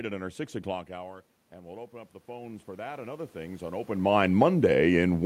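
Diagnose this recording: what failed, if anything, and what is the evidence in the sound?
Automatic gain rising, 0.87 to 3.94 s: the input fell about 15 dB, so call-processing gain crept up about 11 dB, swelling speech and room noise together.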